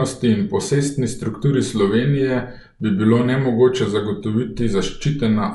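From start to finish the speech sounds dull and band-limited, with nothing above 11.5 kHz, and a rough, fluttering grain sits around the voiced tones. The cause is likely Dolby Digital compression at a low rate, consistent with roughly 64 kbps. Starved of bits, the encoder narrows the band and leaves many frequency lines without mantissa data, and the decoder fills those gaps with dither noise, which produces the plainly audible roughness.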